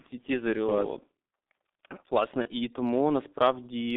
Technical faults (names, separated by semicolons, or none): G.723.1 codec; VoIP packet loss concealed by the speech codec